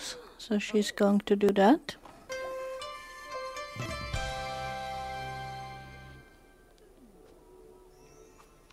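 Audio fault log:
1.49 s and 3.86 s: damaged data in a compressed stream. Corrupted bytes make the decoder misread a frame and resync, leaving a brief glitch.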